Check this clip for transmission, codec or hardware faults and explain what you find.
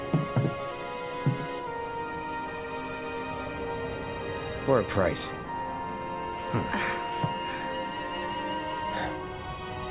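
Nothing stood out on listening to this clip.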